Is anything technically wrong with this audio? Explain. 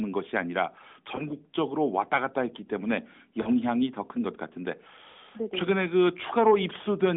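Yes, there are lost AMR speech frames at 1.16 to 1.23 s, 3.42 to 3.50 s and 5.12 to 5.16 s. The decoder patches each gap by repeating the last pitch and vocal-tract settings at falling gain. You hear short dips or warbles, fitting one frame, then two, then one, over the narrowband phone-band sound.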